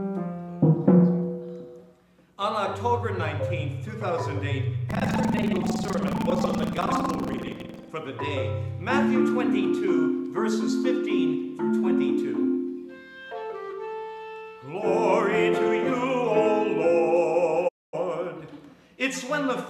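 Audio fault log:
4.88–7.92 s, buffer tearing: a steady robotic buzz at about 21.5 Hz rides on the audio for these three seconds. That rate fits a 2048-sample buffer, which suggests the writing side and the reading side have slipped so that they cross inside every period. Roughly a third of each buffer therefore replays material from around 150 ms earlier, with abrupt joins at both ends of the stale section, and the repeated discontinuity is heard as the rattle.
17.67–17.95 s, digital broadcast dropout: the audio fades out over about 20 ms, stays silent for 240 ms, and then resumes further along. This is consistent with the receiver losing valid frames and muting until good data returned. Because the receiver mutes rather than filling in, whatever was transmitted during that gap is missing, so the audio picks up at a later point with nothing bridging the hole.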